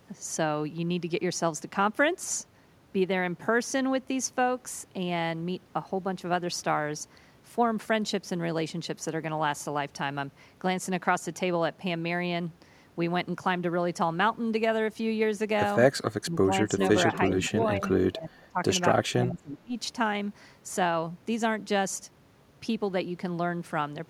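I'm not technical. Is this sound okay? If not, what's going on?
No. Between about 16.2 and 19.8 seconds the speech repeatedly dips and breaks up. This is speech suppressed in double talk, at 16.23–16.79, 17.36–17.85, 18.07–18.58 and 19.12–19.77 s. With both people talking at once, the call's echo remover likely mistook the speaker for echo and turned the speaker down. The words dip, lose their crispness or cut out in pieces.

There is also an echo leak, at 16.80–16.96 and 17.12–17.49 s. A repeat of the speech arrives about 0.39 seconds late, first fairly loud and then quieter. It most likely comes from a loudspeaker at the far end, picked up by the microphone there and sent back. Unlike room reverberation, it is a distinct, delayed copy of the speech and not a smooth blur.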